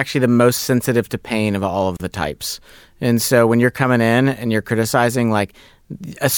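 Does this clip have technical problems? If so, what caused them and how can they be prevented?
Yes. Separately encoded pieces were joined without trimming encoder delay and padding, leaving a gap at a join of encoded pieces: a gap of about 33 ms from 1.97 to 2.00 s in the speech, with smeared edges. To prevent it, encode the material as one continuous stream, or trim each piece's encoder delay and end padding before joining.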